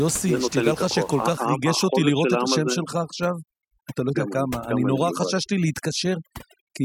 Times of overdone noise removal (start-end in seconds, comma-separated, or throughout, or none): 1.37-6.85